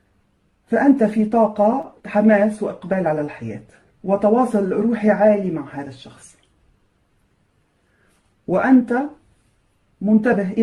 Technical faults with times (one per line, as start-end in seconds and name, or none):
1.81-1.84 short concealed packet loss